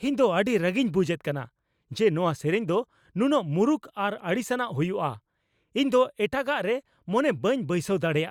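Nothing in the recording sounds wrong from a technical standpoint; the speech comes through steady and intact from the first moment to the last, with no glitches, gaps or odd artefacts to point out.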